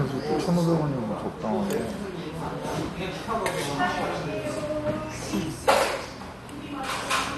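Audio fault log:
Throughout, MP2 compression: dull, gurgling, granular audio with nothing above 12.2 kHz, likely from starved Layer II sub-bands switching off and coarse quantisation, fitting about 64 kbps.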